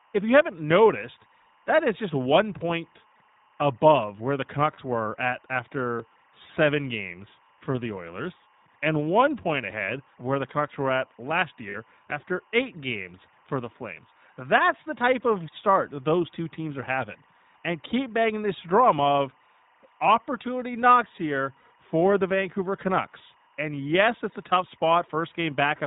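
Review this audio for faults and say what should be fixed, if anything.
Timecode bleed: linear timecode running at 24 frames per second is leaking from an adjacent track or cable into the audio path. Throughout the clip, its square wave adds a steady chirping warble around 1 and 2 kHz, roughly 35 dB below the speech. To prevent it, separate and shield timecode cabling from audio lines and keep timecode off adjacent tracks.

iLBC codec: the speech has passed through the narrowband iLBC codec, which fits its 15.2 kbps mode with 20 ms frames. Across the whole clip, everything above 4 kHz is gone, and the plainly audible coding leaves the voice rough, thin and somewhat synthetic. To prevent it, negotiate a wideband codec such as Opus or G.722 on the call or recording path.

Lost iLBC frames: packets dropped on the network three times, at 4.74–4.80 s, 11.70–11.76 s and 21.60–21.65 s. Each gap is 40 ms, which fits two lost 20 ms frames, and the decoder filled it by repeating the last pitch cycle with noise. 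Each gap is heard as a brief, slightly buzzy held vowel, and the voice recovers almost immediately. To prevent it, improve network reliability or add a jitter buffer and forward error correction to the stream.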